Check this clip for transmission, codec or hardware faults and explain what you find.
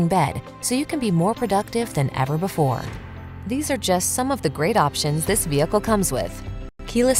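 Nothing here points to a transmission, codec or hardware problem; the audio runs steadily without any of the telltale glitches.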